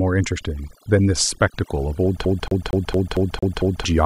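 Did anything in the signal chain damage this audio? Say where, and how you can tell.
Yes. Overdone noise removal in the processing stage runs throughout. Background drops to twinkling silence. Quiet parts of the speech go with it as bands near the noise estimate get cut.

At playback, a CD stuck on one turn. From 2.25 to 3.85 s, one 0.23 s slice repeats seven times. Each jump leaves a short mute.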